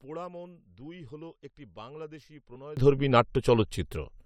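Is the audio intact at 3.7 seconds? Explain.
No. At 3.7 s the clip sits inside a sudden gain jump that runs from 2.77 s to the end, right after "দুই হল একটি বাংলাদেশী". Digital gain most likely stepped up by about 24 dB between adjacent samples without a ramp, so the speech and its background noise leap louder together.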